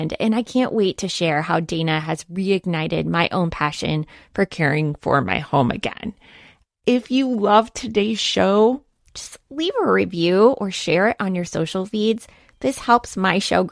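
From 4.52 to 9.09 s, a wrong sample rate slows playback to 0.919 times speed. Pitch drops about 1.5 semitones. Speech sounds slightly low and dragged, fitting 24 kHz audio played at 22 kHz.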